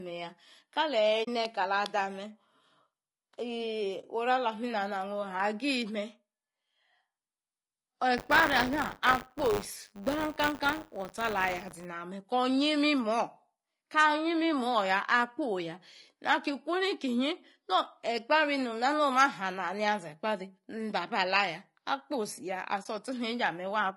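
Throughout, the speech sounds rough and grainy, with noise between harmonics and a thin, synthetic top. That is likely low-delay AAC compression (AAC-ELD), with the damage pointing to around 32 kbps.

At 1.23–1.28 s, 4.01–4.05 s and 22.83–22.86 s, the sound fades out and back in, leaving soft holes of 40, 20 and 20 ms. This is AAC frame loss with muting. The missing frames were decoded as silence, and the overlapping windows smoothed the edges.

From 8.17 to 11.86 s, a steady 100 Hz robotic buzz rides on the speech. This is buffer tearing. Writer and reader have slipped, so a small slice of each buffer replays audio from a few tens of milliseconds earlier, with hard joins on both sides.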